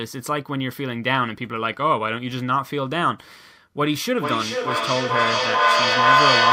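Speech, with feedback echo between two devices from 3.89 s to the end at 6.53 s: each phrase returns roughly every 400 ms and the repeats build to about 6 dB above the speech, as a second device replays the audio into a microphone whose echo canceller cannot remove it.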